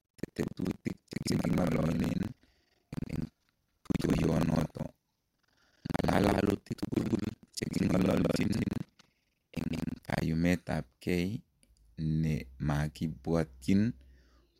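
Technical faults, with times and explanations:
0.00–10.22 s, buffer tearing: the speech carries a steady robotic rattle at 21.5 Hz, which fits a 2048-sample playback buffer. The writer and reader have slipped so they cross mid-period, leaving about half of each buffer filled with audio from roughly a fifth of a second earlier, joined by hard cuts on both sides. The waveform shows abrupt steps repeating at that rate. The spectrogram shows evenly spaced vertical broadband lines that vanish in pauses.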